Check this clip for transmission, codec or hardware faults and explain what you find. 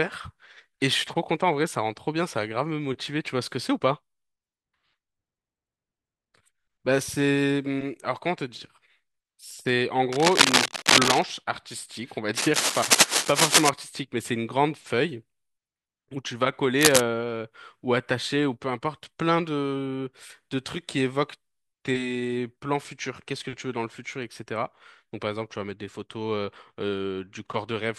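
One hardware fault is present: cable scratch noise, in three bursts at 10.12–11.22 s, 12.37–13.69 s and 16.79–17.01 s. The likely cause is a worn cable or connector being moved, so its contact resistance jumps erratically. Each burst is a harsh scratching, somewhat louder than the speech. A spectrogram shows dense, ragged broadband smears, and the waveform shows spiky, irregular clusters.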